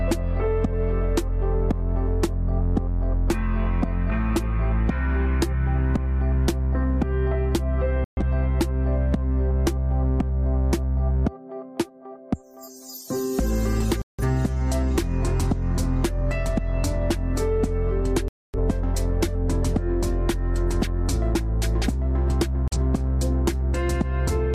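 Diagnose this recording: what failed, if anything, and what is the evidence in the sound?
A digital broadcast dropout failed at the reception stage. The sound mutes four times: 8.04 to 8.22 s, 14.02 to 14.24 s, 18.28 to 18.58 s, and briefly at 22.68 to 22.77 s. Each hole lasts roughly 40 to 260 ms. The steps fit losing whole decoded frames of about 43 ms each. The receiver lost frames or rejected them as corrupt. It muted until valid frames arrived. The missing audio is gone for good.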